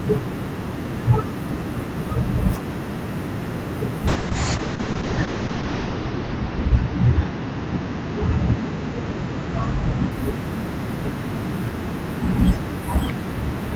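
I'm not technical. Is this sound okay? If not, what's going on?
No. From 4.09 to 10.17 seconds there is a call bitrate drop. The connection seemed to have less capacity, so the speech was squeezed into far fewer bits. It sounds rough and muffled, worst for nearly two seconds, then clears.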